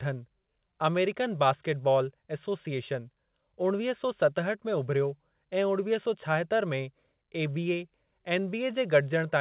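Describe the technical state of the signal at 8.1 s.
At 8.1 s the speech is intact, with no dropout, glitch or distortion, only the narrow band of the G.711 mu-law call path, which leaves nothing above 4 kHz.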